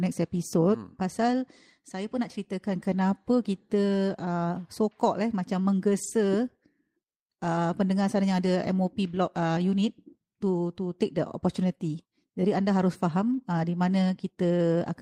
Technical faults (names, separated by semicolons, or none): lost packet rebuilt from error correction